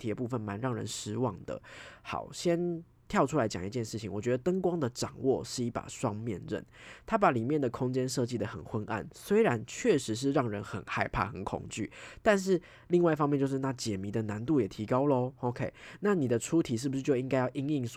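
No technical faults are audible.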